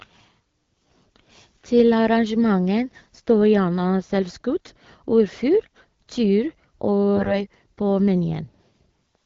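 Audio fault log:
0.77–0.93 s, 4.65–4.82 s, 7.16–7.34 s: AMR bit errors. Flipped bits in the weakly protected part of the AMR-WB frames (HD Voice, 12.65 kbit/s) misplace excitation pulses and skew gain and spectral values, so speech keeps its pitch but turns briefly hoarse and gargly. The last burst is roughest.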